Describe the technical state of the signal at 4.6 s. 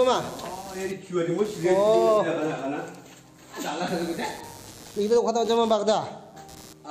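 Computer activity noise runs through 4.6 s as elsewhere: processor load shifts the shared ground, adding buzzy pulses near 100 per second, roughly 25 dB below the signal, seen as evenly spaced vertical striations on a spectrogram.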